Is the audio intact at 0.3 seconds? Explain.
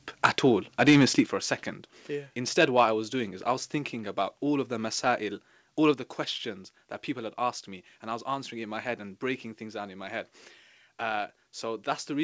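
No. At 0.3 seconds you're hearing the aftermath of two faults just before it. First there's microphone overload from 0.24 to 0.26 s: the peaks run about 8 dB past the converter's ceiling and roughly a fifth of the samples get their tops flattened. That shows up as a short, harsh, crackly edge on the loud bit. The likely cause is the mic input gain being set too hot.

Then at 0.26 s the microphone volume is stepped down by 3 dB in one jump. Everything, voice and background alike, suddenly sits a notch quieter, so at 0.3 s you're on that reduced level rather than the original one. It's likely the call software reacting to that clipped peak by pulling the device's input gain down. The G.722 call path underneath, with nothing above 8 kHz, doesn't add to either problem.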